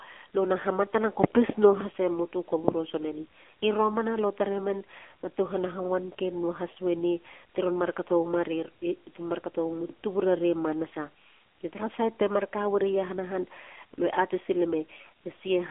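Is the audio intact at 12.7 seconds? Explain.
No, at 12.7 s the speech is still running through the AMR narrowband mobile codec, which colours the whole clip. The sound sits in a phone-line band of roughly 250 Hz to 3.4 kHz, and nothing gets through above about 3.7 kHz. The codec rebuilds the voice from a vocal-tract model fed by sparse pulses, so it comes out clearly buzzy and synthetic, which fits one of the lower AMR-NB modes, around 7.4 kbps.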